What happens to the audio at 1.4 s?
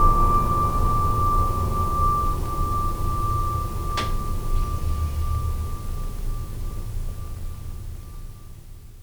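Nothing goes wrong at 1.4 s; the music plays through that moment intact, with no dropout, click or distortion.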